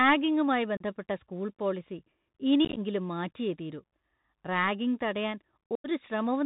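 Bluetooth CVSD headset codec damage runs through this whole speech clip. The 64 kbps stream codes one bit per sample, up or down, with an adapting step, so nothing above 4 kHz survives, a granular hiss sits beneath the speech, s sounds turn scratchy, and loud high sounds distort as they outrun the step. Unconcealed Bluetooth headset packet loss opens abrupt holes at 0.77–0.83 s (about 34 ms missing, around ten packets), at 2.65–2.79 s (about 79 ms scattered over 120 ms, longest gap about 19 ms, a chopped, crackly stretch), and at 5.75–5.88 s (90 ms, roughly twenty packets). Silence or an idle pattern fills each gap, and the CVSD decoder returns briefly quieter afterwards.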